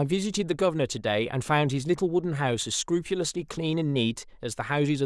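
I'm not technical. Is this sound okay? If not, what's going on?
Yes, this speech recording sounds fine. There's nothing in it that points to a technical problem.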